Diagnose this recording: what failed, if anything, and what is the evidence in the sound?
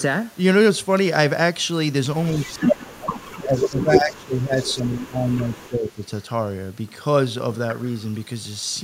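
Speech suppressed in double talk, call processing: the speech dips by about 20 dB at 2.32–2.74 s and 2.94–6.02 s, likely an echo canceller attenuating both overlapping talkers.

Echo leak, call processing: a copy delayed by 178 ms surfaces at 2.39, 2.79, 3.57, 3.94 and 4.6 s. It runs from about 25 dB below the speech to about 5 dB above, likely residual loudspeaker echo.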